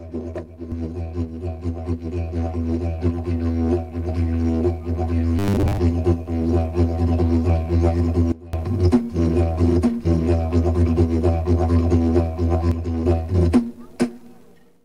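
From 5.39 to 5.78 s the everyday sounds turn into a rigid, metallic buzz pitched at 100 Hz, keeping only a rough outline of what came before. This is robotic sound from repeated short buffers. The 100 Hz pitch fits a 10 ms stretch of audio being looped over and over, likely because fresh audio arrived too slowly and the playback filled the gap with repeats, so most of the real sound in that window was skipped.

At 8.32 s everything drops abruptly by about 21 dB, sound and background noise together, and stays down until 8.53 s. A second, milder drop of about 6 dB runs from 12.72 to 13.06 s. Both are a sudden gain jump: the digital level changed from one sample to the next with no ramp, likely a gain setting being applied instantly.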